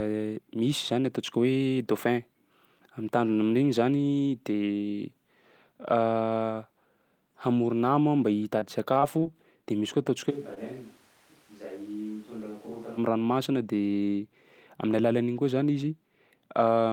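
From 8.59 to 9.24 s, repeated packet loss hits the stream: four short holes, the longest about 23 ms, are each patched by extending the preceding sound. About 83 ms is filled this way and roughly 60 ms of real audio is gone, so the stretch turns choppy.

At 10.32 s the sound abruptly becomes hollow and roomy, thinner in the bass and about 10 dB quieter, with room noise sitting only around 20 dB below the speech. This is likely a switch to a distant microphone after the close one dropped out. It snaps back at 12.97 s.

Inside that stretch, from 10.54 to 10.58 s, a short stall from a late packet occurs: the jitter buffer ran dry, and the receiver held the last sound for about 20 ms until the packet arrived. Nothing is lost, but the sound hangs briefly with a slight buzz or dip, and the delay grows by about 20 ms.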